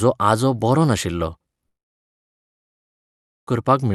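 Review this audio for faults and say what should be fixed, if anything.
From 1.67 s to 3.5 s the speech stops: the last sound trails on briefly as a fading buzz, then roughly 1.8 s of near silence follows before audio resumes, with the intervening material gone. This is a long network dropout, likely from packets failing to arrive over the call path. The receiver's concealment stretched the final sound until it gave up and output silence. Audio on either side carries the Opus codec's roughly 12 kHz bandwidth. To prevent it, stabilise the network link and enable forward error correction or redundancy.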